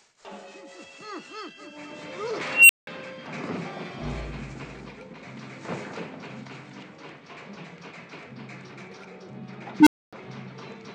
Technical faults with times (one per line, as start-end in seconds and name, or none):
2.48-2.87 unstable filter
9.80-10.13 unstable filter